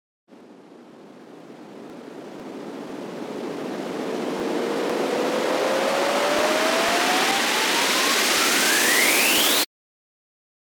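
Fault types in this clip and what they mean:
Periodic USB or driver dropouts: regular ticks about every 0.5 s from 0.40 to 10.38 s, where something blocks the driver and roughly a millisecond of audio is skipped each time.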